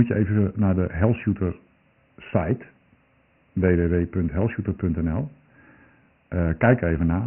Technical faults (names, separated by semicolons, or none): Dialogic VOX ADPCM